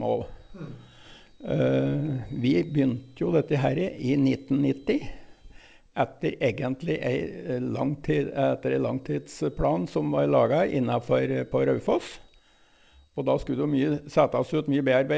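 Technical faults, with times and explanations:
No technical faults heard.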